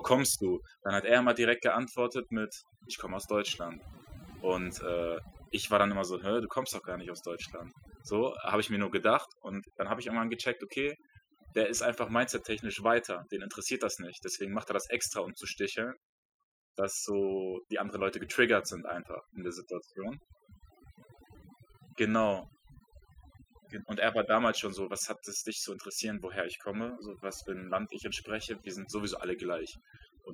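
Overdone noise removal runs throughout: an over-aggressive noise reducer cuts frequency bands near its noise estimate, leaving near-silent, twinkling gaps.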